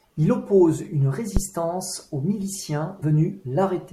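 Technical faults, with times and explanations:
1.37 to 1.42 s, phantom power thump: a deep, low-frequency bump decaying in about 13 ms, as a supply switched on or off on a live input pushes a voltage step through the coupling capacitors. Its weight and its absence of lost material set it apart from a dropout.
3.01 s, compressed frames skipped: the sound jumps ahead by around 70 ms, which fits a few missing 24 ms codec frames.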